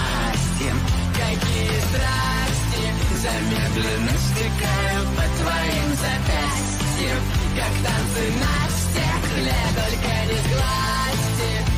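Nothing technically wrong can be heard in the audio. No moment in it points to a technical problem, so there is no time or cause to give.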